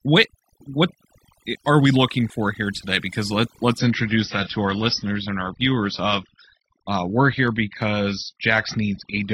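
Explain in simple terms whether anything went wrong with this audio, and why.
Yes, two things went wrong here.

First, there's overdone noise removal across the whole clip. Someone set the noise reduction tool too strong, so it goes after the background noise and also chews into the quieter parts of the voice. That's why the background drops to an odd near-silence with little twinkly specks.

Second, the adaptive stream drops to a lower bitrate at about 3.78 s, right after "here today because let", and stays there to the end. The connection seemingly slowed, so the player switched to a cheaper version of the stream. You'll hear the brightness vanish suddenly, with nothing above about 6 kHz, and the compression gets grainier and more artificial, all without any gap in the sound.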